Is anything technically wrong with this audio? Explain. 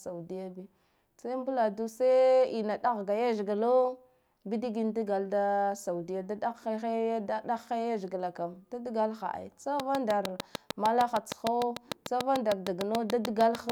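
Yes. From 9.80 s to 13.7 s a train of clicks runs at a steady 6.67 per second, about thirty near-identical pulses peaking roughly 20 dB above the speech. This is likely interference or a faulty connection or power supply, heard as regular ticking over speech and pauses alike.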